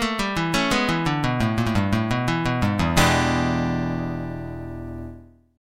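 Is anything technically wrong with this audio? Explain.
No, no technical faults are audible.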